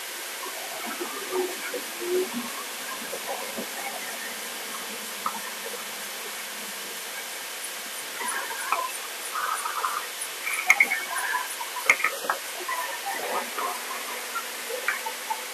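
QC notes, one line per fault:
Throughout: wrong sample rate. Everything runs at twice normal speed and sits a full octave, 12 semitones, too high. Pitch and tempo shift together because the samples are read out faster than they were captured, which fits 24 kHz material played back at 48 kHz.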